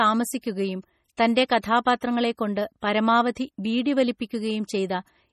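Watery, swirling speech with smeared consonants and no content above 14.9 kHz runs throughout, likely heavy MP3 compression at a low bitrate around 32 kbps zeroing weak frequency lines. At 1.17 s a brief hiss of about 16 ms precedes a sharp attack and softens it. This is pre-echo, where the codec's quantisation noise spreads across the block into the quiet moment before the onset.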